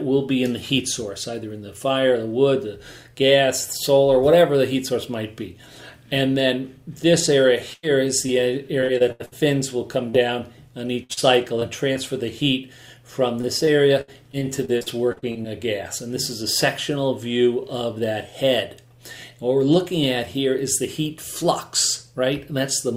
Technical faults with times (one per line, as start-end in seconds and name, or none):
7.73-9.33 repeated packet loss (robotic sound)
10.09-10.15 short concealed packet loss
11.03-11.97 repeated packet loss (robotic sound)
13.41-15.46 repeated packet loss (robotic sound)